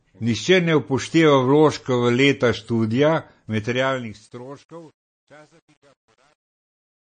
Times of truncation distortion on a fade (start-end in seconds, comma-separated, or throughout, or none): 3.47-7.08